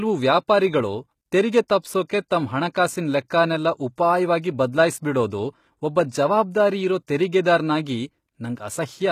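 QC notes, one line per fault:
Throughout: HE-AAC compression, likely. Upper spectrum is rebuilt from copied lower bands rather than coded, so s sounds come out gritty and metallic, with treble harmonics misaligned above the crossover; plainly audible damage, which fits a bitrate around 20 kbps.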